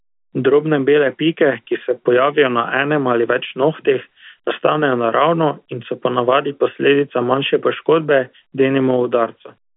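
No technical faults can be heard: the speech comes through the ordinary 200 Hz to 3.5 kHz band of G.711 telephone coding, which fits A-law at 64 kbps.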